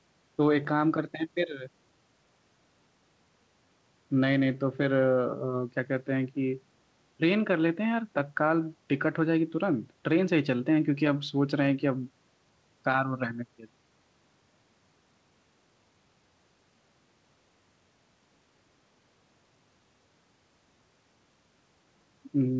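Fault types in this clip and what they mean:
There are no fault types in this clip; the speech came through a WebRTC call path working as intended, with nothing above 8 kHz.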